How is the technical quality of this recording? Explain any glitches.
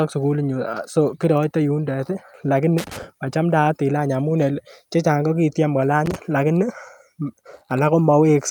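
The recording has one recurring fault: loose connector crackle. It appears twice, from 2.78 to 3.03 s and from 6.06 to 6.16 s. A worn or dirty contact somewhere in the cable path is briefly losing and regaining connection. Each break chops the speech signal. The result is a short, irregular burst of scratchy crackle laid over the speech.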